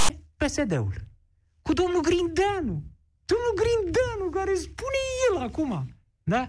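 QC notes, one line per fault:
0.00–0.10 s: file tags played as audio. Text tag bytes decoded as samples give a hard-edged, one-sided rasp, then the zero padding falls to silence.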